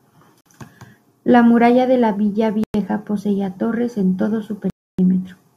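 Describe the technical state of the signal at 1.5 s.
At 1.5 s the speech signal is intact, with no dropout, clipping, distortion or other audible fault at that moment.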